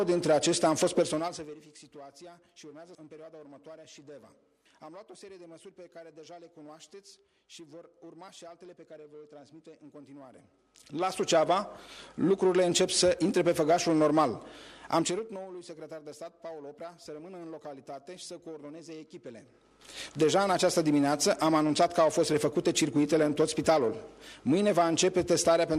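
A rapid ticking rides on the sound as the level falls from 1.02 to 1.62 s, rises from 10.24 to 11.35 s, and falls again from 14.93 to 15.45 s. This is zipper noise: the gain moves in unsmoothed 3 dB, 2 dB and 3 dB jumps, about ten a second, and each jump clicks.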